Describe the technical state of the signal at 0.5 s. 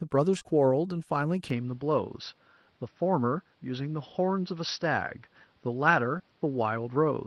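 Just before 0.5 s the signal carries short concealed packet loss, two events back to back at 0.39 to 0.43 s and 0.43 to 0.46 s. Each time about 20 ms of speech arrived too late for the decoder, and the receiver bridged the gap by extending the preceding sound for roughly 15 ms before crossfading into the real audio. The result is a brief smeared wobble spanning about 70 ms, where a short consonant may be lost.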